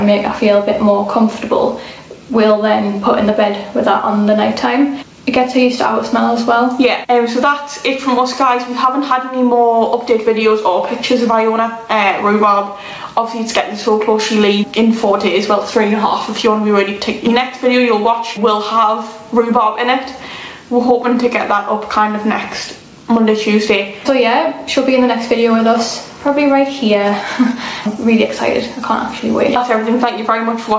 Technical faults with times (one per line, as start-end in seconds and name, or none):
0.00-30.79 gain pumping